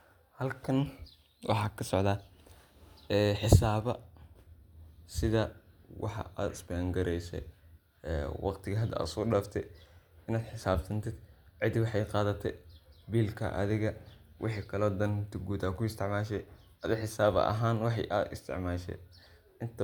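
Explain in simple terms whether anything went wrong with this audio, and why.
Nothing went wrong with this speech recording; the signal carries no technical faults anywhere in it.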